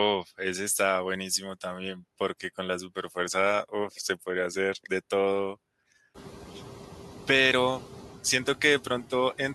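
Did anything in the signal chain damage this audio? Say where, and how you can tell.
Yes. The background dips in the pauses and swells back under the speech, clearest after the room noise rises by about 18 dB near 6 s. These are noise suppressor artifacts from call processing: frame-by-frame band gains pull the noise down only about 4 dB.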